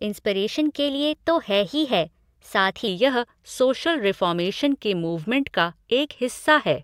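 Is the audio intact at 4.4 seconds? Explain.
Yes, at 4.4 seconds the speech plays through cleanly, with no dropout, click, distortion or other fault at that moment.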